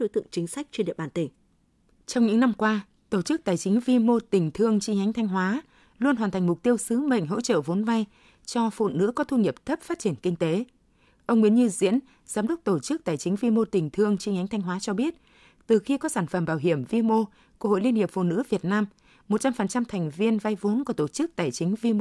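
No technical faults are audible.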